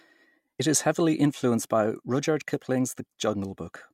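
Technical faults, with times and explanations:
0.57–0.60 s, damaged data in a compressed stream: a brief glitch of about 40 ms breaks into the speech where a stretch of the coded stream was corrupted. The decoder misread those frames, lost sync, and hunted for the next valid frame header before clean audio resumed. On a spectrogram this shows as a short vertical disruption that breaks the harmonic pattern. The waveform shows an abrupt discontinuity that doesn't match the surrounding envelope.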